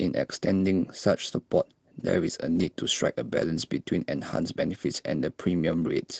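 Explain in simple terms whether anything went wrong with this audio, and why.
Two short moments sound rougher than the rest. Both are a lost packet rebuilt from error correction. The first is at 0.59 to 0.69 s, and the second is at 2.55 to 2.69 s. In each, some chunks of the sound never arrived. Each later chunk carried a cheaper backup copy of the missing one, and the listener's end played that copy. So nothing drops out. The audio just turns grainy and noisy for a split second.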